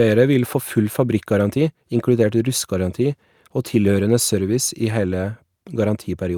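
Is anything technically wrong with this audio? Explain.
Yes, there's clock drift between sender and receiver. The sender runs around 4 percent fast, so the jitter buffer keeps filling and the receiver has to discard bits to catch up.

That shows up as repeated timing corrections from 0.23 to 6.29 s. Small chunks get cut unevenly, and the speech comes out at roughly 104 percent speed, with faint hiccups and a slightly rushed, uneven tempo.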